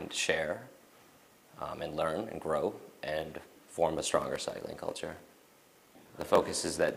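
Block size mismatch (padded) from 3.94 s onward: short blocks are zero-filled, fitting 1024-sample reads, giving a 43.1 Hz buzz and slowing it to 0.938.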